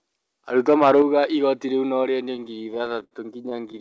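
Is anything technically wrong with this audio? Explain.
Yes, there are three problems in this speech clip, all sitting on top of a call path whose top end stops at 8 kHz, which fits a wideband codec like G.722 at 64 kbps.

From 0.58 to 1.24 s there's microphone overload. The peaks sound like they're pushing about 6 dB past full scale, so the tops get sliced flat on a few percent of the samples. The likely cause is an input gain set too hot for the converter. You hear it as a gritty, crackly edge riding the loudest syllables in that stretch, rather than clean loud speech.

Right in the middle of that, at 1.02 s, the microphone volume is stepped down by about 5 dB in one go. It sounds like the call software heard the clipping and pulled the input level back, which is the likely cause. The speech and the background drop together, instantly, with no fade. It's a single level step, and the harshness doesn't vanish with it.

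From 2.36 s to the very end at 3.80 s there are repeated stalls, a stutter. Packets were coming in late, so the jitter buffer kept running dry, 23 times in that span, and each time the receiver stretched the last bit of sound until the next data turned up. Those fills add up to about 0.3 s, roughly a fifth of the stretch, with the longest at 73 ms. Nothing is actually lost, but the speech drags and hiccups unevenly.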